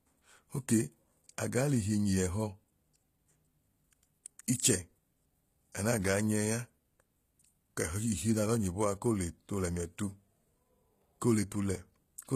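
From start to finish, the speech has a synthetic, gritty top end. S sounds turn lispy and metallic. The treble stays bright, yet it does not sound like the original. Nothing reaches above 14.9 kHz. The likely cause is HE-AAC compression at a low bitrate, perhaps near 20 kbps. Only the lower spectrum is coded. The upper bands are copied up from below and given a rough shape. Their harmonics no longer line up, and the damage is plainly audible.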